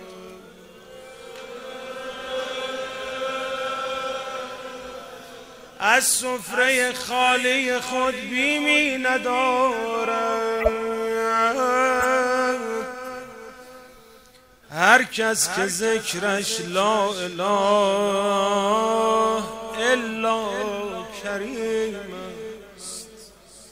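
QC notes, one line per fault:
10.60–16.41 s, corrupt frame decoded: short blips at 10.60–10.68 s (peaking near about -5 dBFS), 12.00–12.05 s and 16.35–16.41 s (both near about -15 dBFS). Damaged bits in a few consecutive compressed frames were decoded anyway, so misread gains and codes put energy at the wrong frequencies for 50 to 75 ms.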